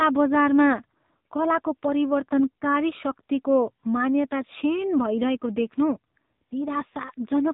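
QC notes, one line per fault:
Throughout: AMR narrowband mobile codec. Nothing above about 3.8 kHz survives, so the speech sounds thin and telephone-like. The damage is heavy. Each short frame is rebuilt from a vocal-tract model and a few pulses, giving a buzzy, synthetic tone that points to a low bitrate near 6.7 kbps.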